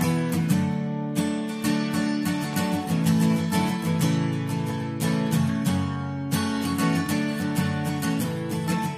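Nothing in this audio stands out as a technical problem; it just runs along without any fault you could point to.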